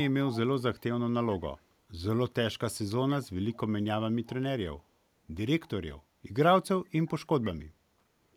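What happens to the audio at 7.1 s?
Right around 7.06 to 7.1 s there's a brief echo leak: a very faint copy of the speech trailing about 120 ms behind, likely from a far-end speakerphone's echo canceller letting some through.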